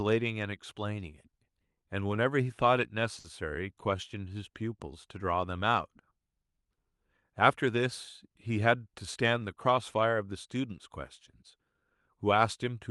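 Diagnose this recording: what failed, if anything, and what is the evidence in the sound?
A late packet emptied the jitter buffer, causing a short stall at 3.19 to 3.26 s. The receiver stretched the last sound by 50 ms, so it holds unnaturally long.

Jitter buffer speed-up: from 9.17 to 9.99 s the receiver trimmed roughly 70 ms of pitch periods. Speech runs at 107% speed, hurried but at unchanged pitch.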